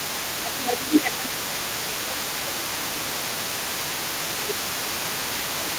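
A second, fainter voice sits underneath the talker from start to finish, roughly 15 dB below the main speech. It is likely the other side's voice leaking through: the talker's loudspeaker playback reached the microphone, and the echo canceller left a residue.

From 0.37 to 3.7 s, 4.22 to 4.58 s, and 4.83 s to the end, the talker's level sinks, by around 15 dB at worst in the first two stretches and about 10 dB in the last. This is likely speech suppressed in double talk, where the canceller cannot separate the talker from the overlapping echo and turns both down.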